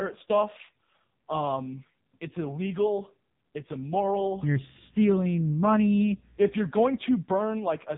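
From start to finish the speech has gone through an AMR narrowband mobile codec, the old 2G/3G phone coder, and it's working hard. Nothing above about 3.7 kHz survives, so everything sounds boxed-in and telephone-thin. The damage is heavy: voices come out buzzy and synthetic, the way a vocal-tract model sounds when it only gets a few pulses per frame to work with, which fits one of AMR-NB's lowest modes, around 5 kbps.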